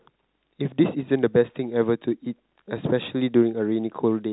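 Nothing goes wrong anywhere in this speech, which simply carries the narrow G.711 telephone coding you'd expect, with nothing coming through above about 3.9 kHz.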